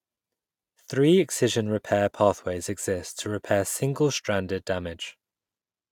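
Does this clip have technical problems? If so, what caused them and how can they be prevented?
No, nothing stood out as a technical problem on listening to this speech clip.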